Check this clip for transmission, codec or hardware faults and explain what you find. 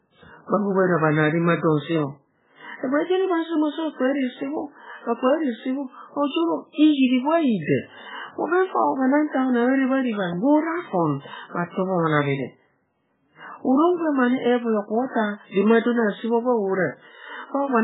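The clip has two faults: a heavily compressed sound across all 18 seconds and three short pre-echoes.

MP3 compression, throughout: nothing survives above 3.8 kHz, and the speech sounds watery and swirly, with smeared consonants. This is likely a low-bitrate MP3 encoding, which fits a bitrate near 8 kbps. The encoder discards the treble and zeroes weak frequency lines that flicker between frames.

Pre-echo at 6.27 s, 9.28 s and 11.50 s: each sharp onset is preceded by a hiss lasting about 52 to 55 ms. The codec spreads quantisation noise evenly across a transform block, so noise scaled for the loud attack leaks into the quiet gap before it and softens the attack.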